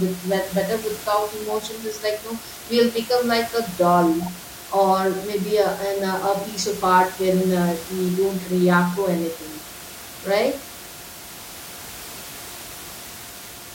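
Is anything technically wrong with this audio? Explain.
No, nothing in the signal points to a technical problem, and the room noise sitting about 16 dB below the speech is part of the recording space rather than a fault of the system.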